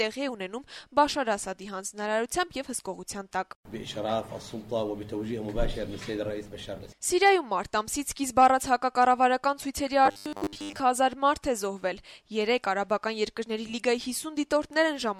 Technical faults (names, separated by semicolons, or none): robotic sound from repeated short buffers